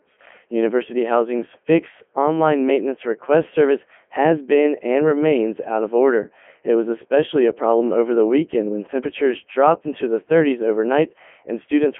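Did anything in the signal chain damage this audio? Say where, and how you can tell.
Yes, at the codec: throughout, a Codec 2 vocoder (fitting 3.2 kbit/s) resynthesised speech from sine waves, leaving it robotic and buzzy, band-limited to 200 Hz–3.4 kHz.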